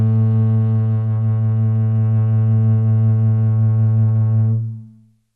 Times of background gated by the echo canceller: none

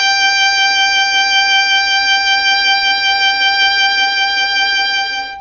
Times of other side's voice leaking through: none

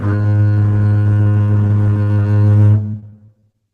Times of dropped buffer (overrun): none

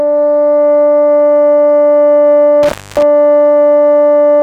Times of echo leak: none

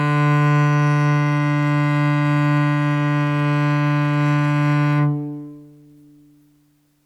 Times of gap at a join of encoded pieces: none

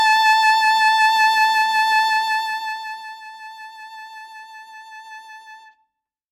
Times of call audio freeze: none

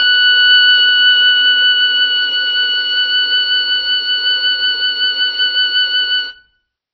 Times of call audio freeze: none

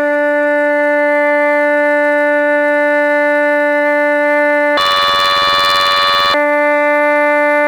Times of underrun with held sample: none

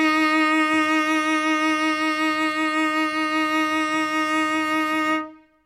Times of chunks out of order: none

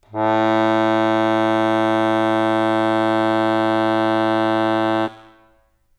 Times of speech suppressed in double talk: none

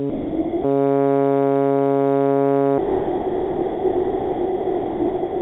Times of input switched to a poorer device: none

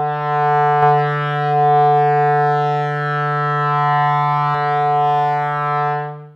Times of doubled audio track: 0.83-4.55

